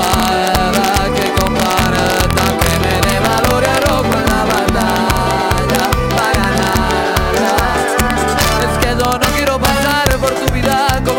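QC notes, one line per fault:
Throughout, integer overflow: gain drives peaks about 4 dB past the integer limit, so a few samples wrap to opposite sign, cracking violently on loud moments.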